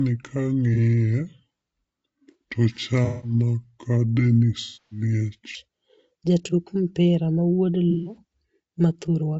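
Low-delay AAC compression runs from 0 s to the end: the speech sounds rough and grainy, with noise between harmonics and a thin, synthetic top band. This is likely AAC-ELD's short frames starved of bits, which fits about 32 kbps.

A section at the wrong speed runs from 0 s to 5.55 s. Playback runs at 0.681 times the original speed, so the voice drags and sits roughly seven semitones low, likely from a clock mismatch.

AAC frame loss with concealment occurs at 0.74 s (30 ms), 3.05 to 3.34 s, 4.61 to 5.02 s, and 7.91 to 8.17 s. The decoder patches the lost audio from the last good spectrum, so the short gap smears and the longer ones turn noisy and phasey before fading back.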